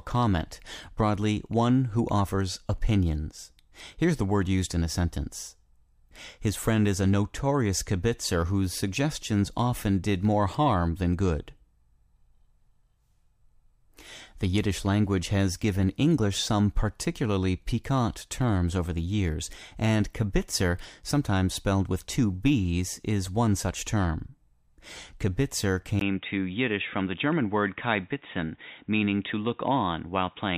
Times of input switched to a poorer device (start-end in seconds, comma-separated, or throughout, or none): 25.99-30.57